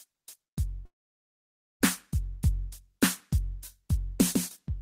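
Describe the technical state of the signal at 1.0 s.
Packets were likely delayed in transit and the jitter buffer ran dry, causing a call audio freeze from 0.85 to 1.82 s. The last sound trails off briefly and then gives way to near silence, after which the music resumes exactly where it stopped, nothing lost but running about 0.95 s late.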